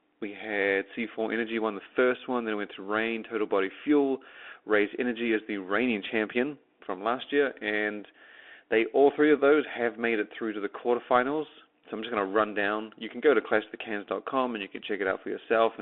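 Throughout the speech, the audio has passed through a Bluetooth CVSD headset codec, a one-bit delta coder consistent with a 64 kbps stream. Only 300 Hz to 3.5 kHz survives, so the sound is thin and boxy, with scratchy s sounds over a granular hiss.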